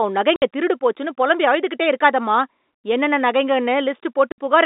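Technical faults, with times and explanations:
0.36 s and 4.32 s: packet loss filled with silence. Two abrupt 60 ms gaps with hard edges, the first right before "திருடு போச்சுன்னு பொலம்பி அழுதுகிட்டே". Each fits three lost 20 ms packets replaced by silence.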